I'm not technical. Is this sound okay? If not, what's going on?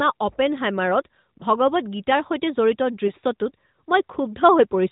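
No. There are two tiny hiccups in the speech, brief dips or warbles at 1.38 to 1.45 s and at 3.08 to 3.11 s, just after "গীতাৰ সৈতে জড়িত". These are lost AMR speech frames. A radio error spoiled a small piece of the phone signal, about one 20 ms chunk each time, and the narrowband mobile codec patched over it by repeating the previous sound more quietly.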